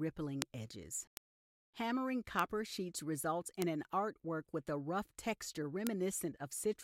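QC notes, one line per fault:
0.42 s, 1.17 s, 2.39 s, 3.62 s, 5.87 s, bit error spike: each is a single sharp, broadband tick unrelated to the surrounding audio, peaking near about -11 dBFS at 0.42 and 5.87 s and about -17 dBFS elsewhere. A flipped bit jumped one or a few consecutive samples by a power of two before they returned.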